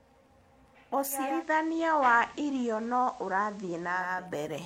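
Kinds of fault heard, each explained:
Digital radio blending to analogue: at 1.06 s the receiver loses its digital stream and cross-fades over 430 ms to the FM broadcast, returning at 4.29 s. A spectrogram shows a hiss floor about 30 dB down. Waveform level stays unchanged.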